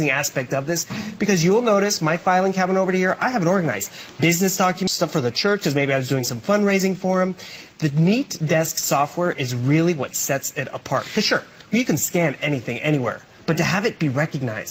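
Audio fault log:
4.87 s, skip ahead: playback lurches forward with no gap, about 0.7 s of audio gone and the two sides butted together almost directly. Later audio was already queued, so the missing stretch was dropped, lost in transit or discarded as the jitter buffer overflowed.
5.47–6.03 s, jitter buffer speed-up: this half-second runs about 6% fast while keeping its pitch, sounding slightly hurried. The buffer was holding more than its target delay, so the receiver trimmed many pitch-period-sized slices in a row, removing roughly 40 ms altogether.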